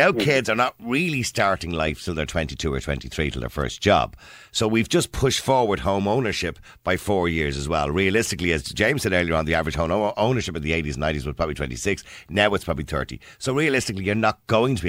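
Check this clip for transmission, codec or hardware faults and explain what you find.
No transmission, codec or hardware faults are audible here.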